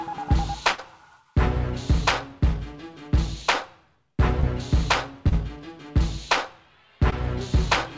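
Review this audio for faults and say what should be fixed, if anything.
From 0.72 to 0.80 s the sound stalls into a held, fading sound, then jumps ahead as though a slice were cut out. This is a burst of packet loss. Several consecutive packets arrived too late or not at all, so the receiver stretched the last sound for about 62 ms while lowering its level, and about 60 ms of the real audio never played. Resuming past the gap produces the audible skip. Prevention: reduce network congestion on the link and allow the jitter buffer more depth, or enable forward error correction, so runs of lost packets can be recovered.

At 4.40 to 4.45 s, 5.29 to 5.34 s and 7.10 to 7.14 s there are brief smears, each a short smear or wobble. This is short concealed packet loss. Each time about 20 ms of audio failed to reach the decoder in time. The receiver synthesised a stand-in from the preceding sound, 28 ms at the first two points and 12 ms at the last, then crossfaded back into the real signal. 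Prevention: improve network stability and give the jitter buffer enough headroom to absorb late packets.

The call path itself, whose 8 kHz bandwidth ceiling fits a G.722 codec at 64 kbps, is not a fault.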